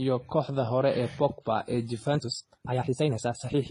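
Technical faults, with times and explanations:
Throughout: transcoding between lossy codecs. The audio was likely encoded by one lossy codec and then re-encoded by another. The second encoder wasted its small bit budget on the first encoder's errors and added its own. The combined artefacts, heard together, point to a WMA pass at around 32 kbit/s followed by HE-AAC at around 20 kbit/s. The lowest cut-off in the chain stays.
2.13 s to the end: time-stretched section. From this point the speech was squeezed to about 1.88 times its original pace, likely by software fitting it to a shorter length. To keep the pitch steady it discarded short slices of the signal rather than simply playing faster. The sound therefore jumps abruptly into a rushed delivery while the pitch stays unchanged.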